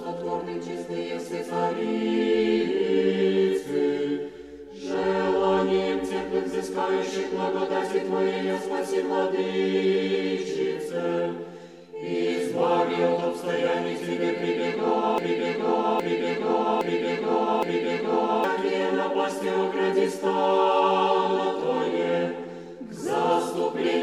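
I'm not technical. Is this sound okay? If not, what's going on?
No. Something in the playback or streaming chain likely stalled at 15.18 seconds and kept resending the last short piece it had, a fault called a broken-record loop. You hear the same 0.81-second snippet play four times in a row, exactly alike, until 18.44 seconds. Whatever should have played during those three-odd seconds never arrives; it is simply missing, and the sound picks up again afterwards.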